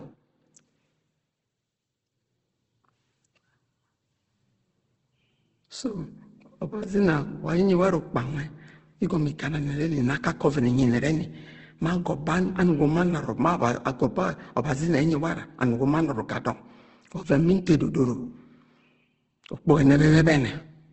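Throughout the speech, nothing is present above about 8.2 kHz, and tones sound grainy, rough and noisy rather than swirling, with heavy damage. The likely cause is Opus compression in its CELT music mode, filling starved bands with folded or noise content at a low rate, which points to around 12 kbps.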